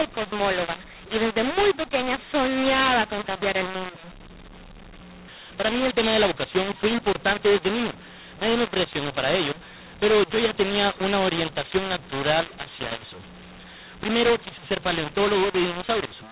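A mu-law and A-law mix-up runs through the whole recording: speech coded with the mu-law curve has been expanded with the A-law one. Loudness steps land at the wrong sizes, so the voice turns harsh and distorted, and pauses fill with hiss where near-silent samples get lifted. The dull, 4 kHz-limited band points to ordinary 8 kHz telephone coding.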